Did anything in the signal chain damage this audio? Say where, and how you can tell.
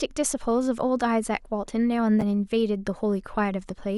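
Yes: damaged data in a compressed stream at the codec stage, 2.18 to 2.24 s. The decoder misreads corrupt frames, producing a blip that shows as a brief broadband spectrogram smear and a waveform discontinuity.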